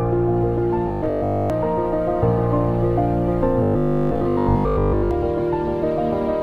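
At 0.88–1.50 s and 3.63–5.11 s, robotic sound from repeated short buffers: a rigid 50 Hz buzz, likely 20 ms chunks repeating while most audio is skipped.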